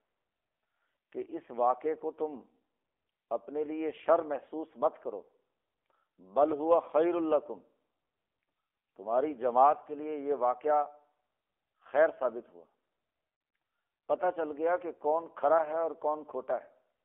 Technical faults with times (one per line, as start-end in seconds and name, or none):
0.00-17.04 AMR narrowband mobile codec